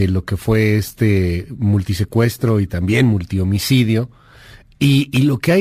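Throughout the speech there is crude rate conversion, with samples simply repeated rather than filtered, which fits a 44.1 kHz to 48 kHz change. It leaves an inharmonic gritty fizz roughly 30 dB below the speech, tracking loud and bright passages. Steady hiss would not follow the speech this way.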